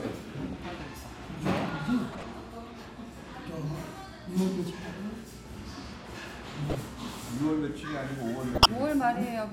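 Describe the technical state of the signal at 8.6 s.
Around 8.6 s there is a corrupt frame decoded fault. Bit errors damaged a short run of compressed frames, roughly seven of them, from 8.55 to 8.69 s, and the decoder played them anyway. The misread gains and codes place energy in the wrong parts of the spectrum for that 0.14 s stretch, so an unnatural burst cuts across the sounds, peaking somewhere near -10 dBFS, before clean decoding resumes.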